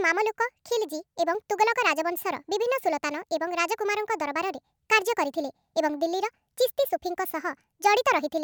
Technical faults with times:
0.00-8.43 wrong sample rate

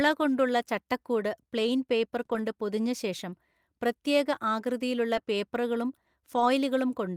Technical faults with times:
2.25-2.29 short concealed packet loss
2.29-2.39 lost packet rebuilt from error correction
5.15 lost packet rebuilt from error correction
6.35-6.45 lost packet rebuilt from error correction

